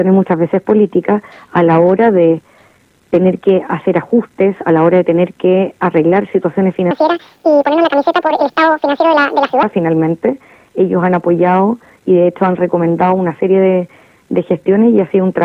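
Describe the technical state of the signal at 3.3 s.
At 3.3 s the signal is intact, with no audible technical fault at that point.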